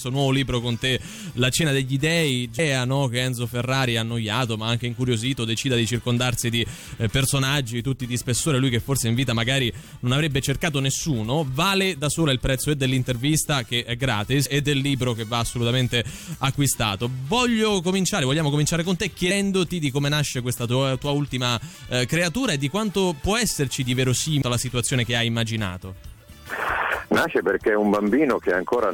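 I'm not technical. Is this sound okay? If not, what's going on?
No. Some of the data in the compressed file was damaged, so the player couldn't read small pieces of it and had to skip ahead to find its place again. This is called damaged data in a compressed stream. Each time, you hear a very short chirp or blip lasting a split second, at 2.58, 14.45, 19.30 and 24.41 seconds, and once more from 26.31 to 26.33 seconds.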